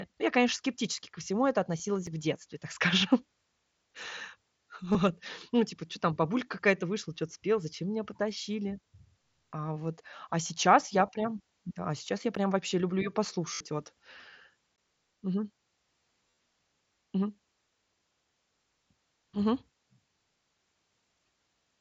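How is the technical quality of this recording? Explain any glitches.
The recording, a speech clip carried over a Bluetooth wideband headset link using mSBC, has two kinds of glitch: concealed packet loss and short dropouts to digital silence.

Concealed Bluetooth headset packet loss: radio packets between headset and phone failed to arrive, and the receiver filled each gap by repeating the closest-matching recent stretch of waveform. The brief losses at 1.78 s (after "скептически ко всему это"), 4.92 to 4.95 s and 11.07 s are short runs of lost frames. The 60 ms run at 13.54 to 13.60 s, after "вообще люблю ее", becomes a held buzzy tone. At 16.29 to 16.38 s, scattered losses with a longest run of 37.5 ms buzz and warble as real audio returns.

Block of digital silence: the playback path likely missed its deadline to fill the output buffer, so whole blocks went out as zeros. The audio drops to nothing and returns with no fade. 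At 2.07 s, just before "в детстве так скажем", a 5.8 ms hole, which fits a 256-sample buffer, sounds like a tick. At 12.35 s an 11.6 ms gap, fitting a 512-sample buffer, sounds like a tick, and at 14.76 s a 17.4 ms gap is heard as a short hole.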